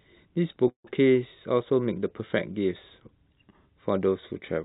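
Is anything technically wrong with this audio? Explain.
Yes. There is a call audio freeze from 0.68 to 0.87 s. The speech stops and is replaced by a short fading continuation of the last sound, which drops to silence for about 110 ms. The likely cause is packets held up in transit, so the jitter buffer ran empty and the receiver filled the wait. About 163 ms is inserted in total. Nothing is lost. The speech resumes where it stopped, 163 ms later than before. The whole clip is band-limited to 4 kHz, consistent with a G.711 mu-law call path.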